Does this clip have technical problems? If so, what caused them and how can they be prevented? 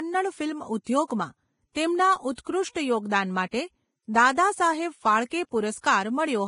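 Yes. Vorbis compression throughout, likely: nothing above 10.5 kHz, and the treble is coarsely quantised into hissy, grainy noise, which points to a bitrate near 28 kbps. Encoding at a higher Vorbis quality setting would prevent it.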